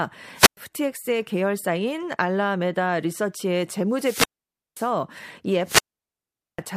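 At 0.35 to 0.57 s, 3.91 to 4.96 s and 5.64 to 6.62 s the speech breaks up in a wireless microphone squelch dropout, with the muted holes lasting 0.11 s, 0.53 s and 0.8 s. The FM link weakens, hiss swells, and then the receiver's squelch shuts the output. Unlike a digital dropout's abrupt gap or stutter, each hole is heralded by rising static before the near-silence, and the voice then returns.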